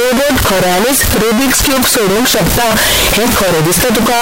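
From start to finish the speech is rendered as a harsh, near-square waveform sitting at an almost fixed, high level, with background noise as loud as the voice while pitch stays traceable. This points to a float read as integer, likely 32-bit float samples interpreted as 32-bit integers.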